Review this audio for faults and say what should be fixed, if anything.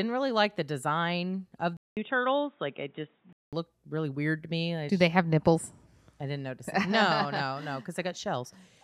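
Right after "like the design of", at 1.77 s, the speech cuts out for 200 ms and returns dull and narrow, with nothing above 3.8 kHz and new background noise about 40 dB down. The level stays about the same. Full bandwidth returns at 3.53 s, just before "really weird to me". This is likely an input switched to a poorer device, such as a headset dropping into its call profile. Lock the recording to a single input device and turn off automatic device switching before recording.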